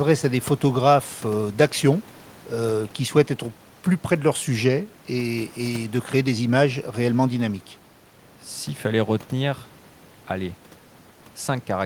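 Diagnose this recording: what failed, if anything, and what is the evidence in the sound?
Nothing failed; only ordinary room noise underlies the speech.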